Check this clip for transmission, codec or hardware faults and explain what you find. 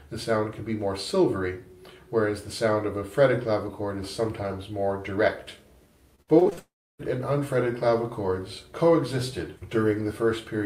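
Two transmission faults occur back to back past the middle of the clip.

Repeated packet loss (robotic sound) runs from 6.15 to 6.59 s. Six separate gaps, the longest 53 ms, removed about 180 ms of audio. The receiver patched each one by extending the preceding sound, so around 40% of the stretch is filler. The result is choppy and robotic, with fragments missing.

A long network dropout follows from 6.59 to 7.01 s. About 400 ms of audio is lost, likely because nothing arrived from the network for that span. The last sound is briefly stretched into a fading buzz, then about 310 ms of silence follows before the audio resumes with that section gone.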